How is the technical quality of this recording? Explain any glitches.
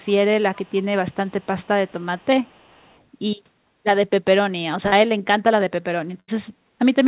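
The recording has three kinds of glitch: a faint delayed repeat in the first three seconds and two dropouts later on. The sound stops at 4 kHz, which fits a narrowband G.711 mu-law call path at 64 kbps.

Echo leak appears at 0.54–0.85 s, 1.11–1.46 s, 1.62 s, 1.88 s, 2.18–2.26 s and 2.44–3.01 s. A copy of the speech trails the original by about 421 ms, at only about 30 to 40 dB below it. The likely cause is a far-end loudspeaker whose echo canceller let some of its microphone pickup return. A fixed lag this long marks it as echo rather than room reverberation, which would smear smoothly rather than repeat as a distinct copy.

Short concealed packet loss occurs at 4.88–4.95 s. About 40 ms of audio never arrived in time, and the receiver covered roughly 38 ms of it by extending the preceding sound before blending back into the real signal. The result is a brief smear or wobble. Unlike the burst later in the clip, it is too short to fade.

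A burst of packet loss hits at 6.20–6.31 s. Around 80 ms went missing, and the receiver filled all of it by continuing the last sound while turning it down. A voiced sound is heard as a held, decaying buzz, and an unvoiced one as a fading hiss, before the speech resumes further along with that stretch gone. It is longer and more clearly a gap than the 4.88 s event.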